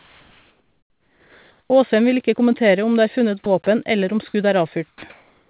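A speech recording carried over a call path that is band-limited at 4 kHz, which fits G.711 mu-law coding. Comfort noise in place of the background fills 0 to 1.7 s, about 4 dB quieter than the real background, and again from 5.1 s to the end, about 1 dB louder. On a spectrogram these stretches show smooth, uniform noise without the background's texture, likely because the sender's discontinuous transmission stopped during pauses. The onset is clipped by the voice detector at 1.68 to 1.70 s, so the waveform starts abruptly with no gradual rise, likely from a slow detector missing the first 20 ms. Sound is likely dropped by the voice detector at 3.44 to 3.46 s (20 ms) and at 4.88 to 5.02 s (about 70 ms of sound lost). In both places the speech energy gives way to flat noise on the spectrogram before resuming.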